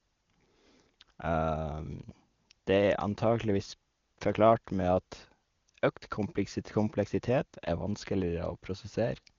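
No technical faults can be heard anywhere in this speech.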